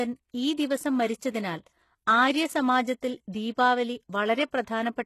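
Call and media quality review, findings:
HE-AAC compression, throughout: treble gritty and metallic, sibilants lispy, nothing above 12.3 kHz. Likely cause is spectral band replication copying lower bands upward, so harmonics misalign; consistent with roughly 16 kbps. Unlike a plain low-pass, treble exists but sounds synthetic.

Pre-echo, 4.63 to 4.67 s: short hiss spread over 38 ms immediately before a sharp attack, which sounds softened and smeared. Transform codec block spreading quantisation noise into the quiet lead-in. Unlike reverb or ringing, the noise precedes the onset rather than trailing it.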